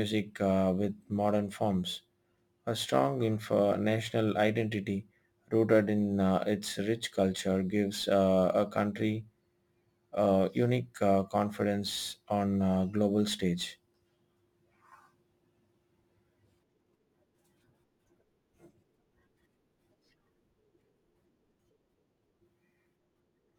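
Throughout the speech there is crude rate conversion. The audio was resampled by taking the nearest sample, so samples were simply dropped or repeated with no interpolation or filtering. The ratio fits a 48 kHz to 44.1 kHz conversion, so the skipped-sample pattern recurs at a fixed rate and produces shifted, inharmonic copies of the voice. At roughly 30 dB below the signal, this error is heard as a gritty, inharmonic fizz that follows louder and brighter syllables.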